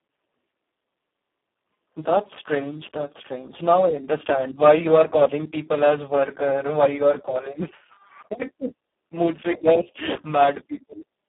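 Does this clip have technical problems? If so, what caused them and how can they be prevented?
Yes. Throughout the clip the speech carries heavy Speex codec damage. Speex is a CELP coder, and the hoarse, noisy texture points to a very low quality setting, around 4 kbps, where too few bits remain to model the excitation. The audio sits in a narrow line band of about 200 Hz to 3.5 kHz, with nothing above 3.8 kHz. To prevent this, encode at a higher Speex quality or wideband mode, or use a modern codec such as Opus.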